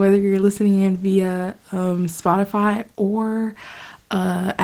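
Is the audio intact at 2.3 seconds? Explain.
No, Opus voice compression runs through the whole clip, 2.3 s included. A linear-prediction layer codes the lower band coarsely, with a separate layer above 8 kHz, at what sounds like roughly 16 kbps, leaving the speech plainly muffled, hoarse and slightly robotic.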